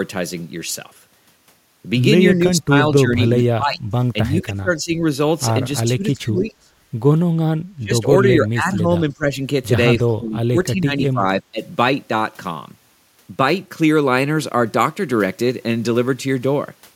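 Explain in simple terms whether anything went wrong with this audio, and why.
The speech keeps dipping or dropping out at 2.38–5.04, 5.85–6.72, 7.75–8.06, 8.24–9.32 and 9.99–11.6 s. That's likely speech suppressed in double talk: the echo canceller mistook talking over the other side for echo.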